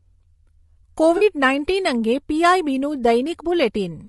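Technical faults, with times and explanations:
Throughout: low-delay AAC compression. The speech sounds rough and grainy, with noise filling the gaps between harmonics and a thin, synthetic top band. Short coding frames resolve pitch poorly. This is likely AAC-ELD at a low bitrate, around 32 kbps.
1.17 to 1.23 s: AAC frame loss with concealment. About 40 ms of audio, which fits two lost frames, is replaced by a smeared, noisy patch. The decoder rebuilds the gap from the last good spectrum, so detail blurs instead of dropping out.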